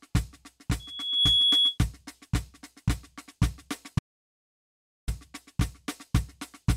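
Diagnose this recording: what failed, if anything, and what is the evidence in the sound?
Loudspeaker feedback squeal at the analogue acoustic loop: from 0.79 to 1.78 s a 3.4 kHz tone swells over roughly 0.4 s to about 5 dB above the music. On a spectrogram it appears as one bright horizontal line.

Audio dropout to silence from 3.99 to 5.08 s: the music cuts out completely for 1.09 s. The waveform shows a flat line and the spectrogram a blank column, likely from a lost input link upstream of the recorder.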